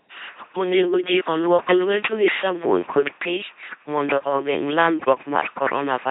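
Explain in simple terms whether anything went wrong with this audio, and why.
Something went wrong from start to finish. The speech passed through an LPC-10 vocoder. It rebuilds each moment as either a buzz or a hiss, so the voice sounds robotic and mechanical. Damage is heavy, and nothing above 3.8 kHz survives, so it sounds muffled.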